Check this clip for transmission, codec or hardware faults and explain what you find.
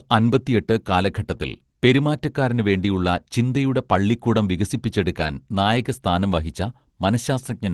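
Two kinds of transmission fault appear in the speech, both from packet loss on the call path, which sounds like a roughly 24 kbps Opus stream band-limited to about 12 kHz.

Short concealed packet loss occurs at 1.37 to 1.41 s. About 20 ms of audio arrived too late to decode, and the receiver bridged the hole by extending the preceding sound before crossfading back. It is heard as a brief smear or wobble in the speech.

A lost packet rebuilt from error correction occurs twice. At 5.19 to 5.25 s it spans two packets, about 40 ms. At 6.19 to 6.21 s it is a single packet of about 20 ms. In each case the decoder played a coarse low-bitrate copy carried in the following packet, so there is no gap, but those stretches sound rougher and noisier.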